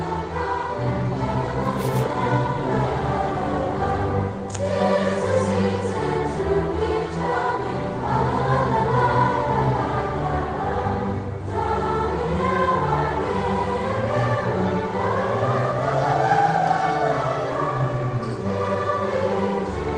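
No technical faults can be heard anywhere in the audio. Nothing in the sound points to a problem in how it was captured or passed along.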